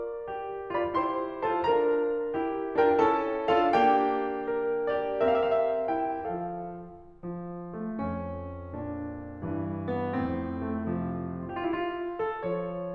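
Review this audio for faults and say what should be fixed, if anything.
Nothing to fix: no audible faults anywhere in the music.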